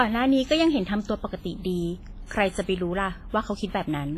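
Throughout the speech, heavy washy ringing and signal-following hiss, with nothing above 15.4 kHz, point to likely WMA compression at a low bitrate, around 24 kbps.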